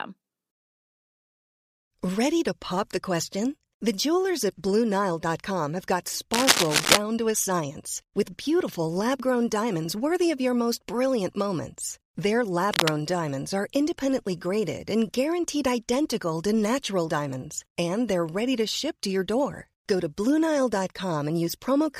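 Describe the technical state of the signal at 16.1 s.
At 16.1 s the speech signal is intact, with no dropout, clipping, glitch or other fault audible at that moment.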